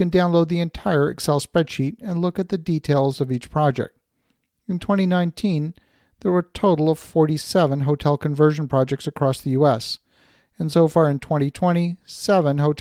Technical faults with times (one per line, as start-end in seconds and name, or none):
none